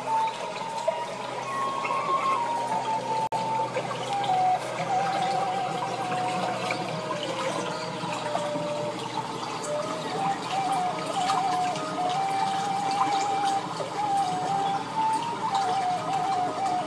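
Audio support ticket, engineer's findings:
Gap at a join of encoded pieces: separately encoded segments joined untrimmed, encoder delay and padding retained. Gap of 50 ms, 3.27–3.32 s, smeared edges, sound resumes unchanged.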